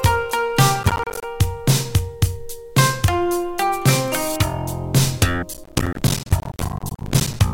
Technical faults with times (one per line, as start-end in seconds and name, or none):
0.76-1.24 processor overload crackle
5.54-7.40 processor overload crackle